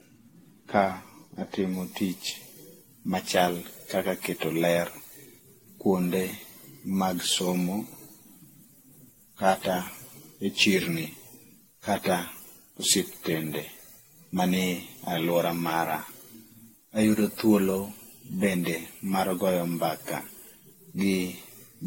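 Speech, and throughout it has the swirling, hollow, smeared character of generation loss: transients blur, the noise floor has a watery texture, and nothing is present above 16.6 kHz. That degradation is worse than a single lossy pass would produce. The likely cause is repeated decoding and re-encoding, around seven passes, through an AAC-LC chain consistent with 64 kbit/s. Each pass requantises on a shifted frame grid, so the spectral holes and quantisation noise accumulate instead of staying fixed. From 1.74 s to the end, pre-emphasis is left on. The treble is lifted by about 10 dB at 10 kHz relative to 1 kHz, matching an FM 50 µs curve, and no complementary de-emphasis was applied on playback. The result is thin, bright and sibilant.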